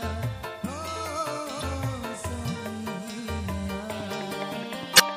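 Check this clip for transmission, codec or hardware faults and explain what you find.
Two short glitches from damaged data in a compressed stream, at 1.58–1.63 s and 4.95–5.00 s: corrupted frames throw the decoder off sync, leaving brief blips.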